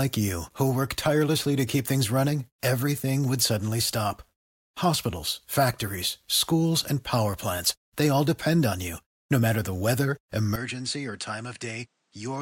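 At 10.56 s, right after "matter the weather", the sound abruptly turns duller and about 10 dB quieter, and stays that way to the end at 12.41 s. Nothing above 9.8 kHz survives, and a faint new background noise appears well below the speech. The switch is instant, with no gap. This is likely an input switched to a poorer device. A simple filter or gain change would not also bring its own noise floor along with the new tone.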